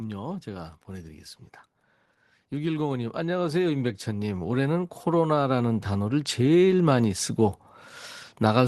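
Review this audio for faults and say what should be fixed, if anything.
Automatic gain rising runs from 2.5 s to 7.25 s. Over those nearly five seconds the level climbs by about 11 dB. The voice and the background noise swell together. That shared rise is the giveaway. The gain control judged the input too quiet and kept pushing its gain up. It cannot separate speech from noise, so both grow. The call codec's upper limit near 12 kHz stays put throughout. To prevent it, set a proper input level at the source, or cap the gain control's maximum boost.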